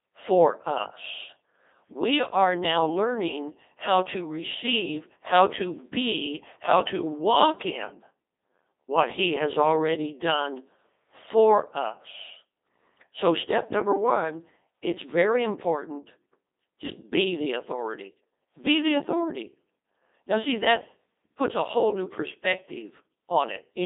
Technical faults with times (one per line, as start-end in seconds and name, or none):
0.00-23.86 Codec 2 vocoder